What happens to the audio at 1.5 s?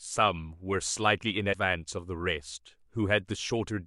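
A brief glitch cuts through the speech from about 1.51 to 1.55 s, roughly 40 ms long. This is damaged data in a compressed stream: corrupted bytes there leave the decoder unable to read those frames, so it loses sync until the next valid frame header.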